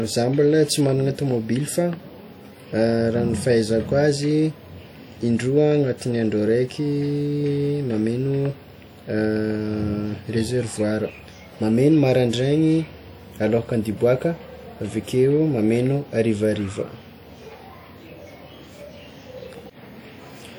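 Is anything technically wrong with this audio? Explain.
Yes, there's plainly audible codec damage throughout the speech: a ringing, washy quality with hiss that swells and fades with the signal. That's likely WMA compression, with smeared quantisation noise and dropped weak detail, which fits a bitrate around 48 kbps.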